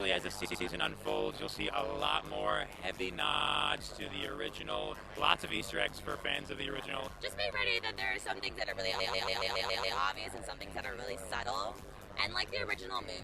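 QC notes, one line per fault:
Throughout: overlap-add ripple. The audio was split into windowed frames and rejoined with an overlap whose window gains do not add up to a constant, so the level swings once per frame at around 100 Hz, with a depth of about 60 dB. At that rate and depth the gain nearly closes between frames, and the result is a metallic buzz with extra tones laid over all of the sound rather than a fast flutter.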